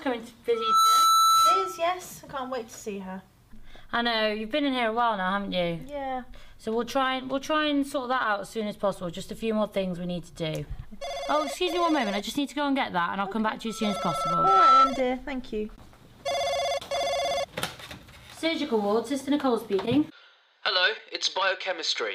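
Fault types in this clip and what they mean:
Loudspeaker feedback squeal: A microphone picks up its own loudspeaker, and at one frequency the loop gain passes one. That tone feeds itself and keeps rising. It is a single 1.3 kHz tone. It appears twice, from 0.54 to 1.86 s and from 13.66 to 14.94 s. The first swells up within about a third of a second. The second builds more slowly, over about a second. Both reach roughly 10 dB above the surrounding sound.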